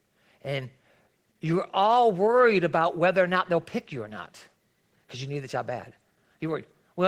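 Opus voice compression runs throughout: hybrid coding with SILK below 8 kHz and CELT above, damage plainly audible, as from a rate near 16 kbps, leaving the speech hoarse and slightly robotic.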